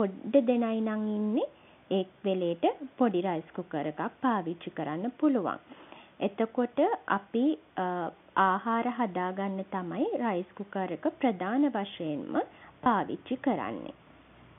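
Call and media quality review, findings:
Packet loss with pitch repetition, 12.84–12.86 s: about 20 ms missing, which fits one lost packet; the receiver's concealment repeated the last pitch period, so the gap is a brief held, buzzy sound rather than a dropout. G.711 mu-law telephone coding audible only as the narrow telephone band.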